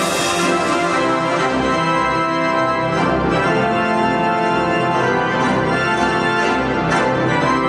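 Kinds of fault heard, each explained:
No kinds of fault are heard.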